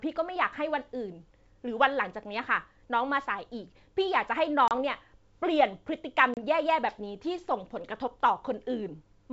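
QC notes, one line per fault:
4.68–4.72 s and 6.34–6.43 s, packet loss on an ADPCM call: about 30 ms of speech drops to hard-edged silence, then the speech resumes with brief distortion, because the decoder's adaptive predictor and step size have drifted from the sender's before resynchronising within tens of milliseconds.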